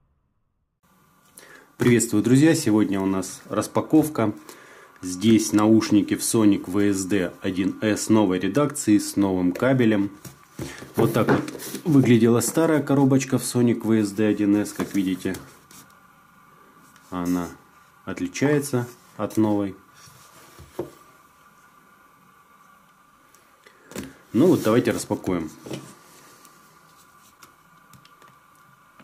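No technical faults can be heard anywhere in the audio.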